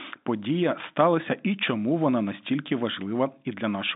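No technical faults can be heard in this speech.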